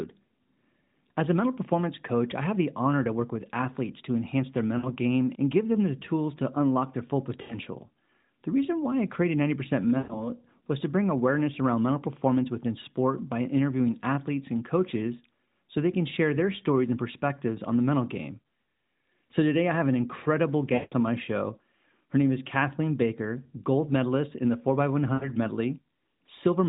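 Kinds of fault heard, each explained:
Lost AMR speech frames: bits of the phone call got corrupted over the radio link, so the decoder just kept replaying its last good pitch and vocal-tract settings while turning the gain down. You hear five short smeared, fading patches at 4.78, 7.42 (after "to unlock their full"), 9.98, 20.74 and 25.14 s. The worst is about 0.2 s between "I have an incredible" and "on my show her", which fits roughly nine dropped 20 ms frames.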